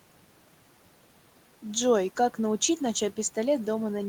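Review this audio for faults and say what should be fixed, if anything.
Nothing needs fixing; no faults can be heard here.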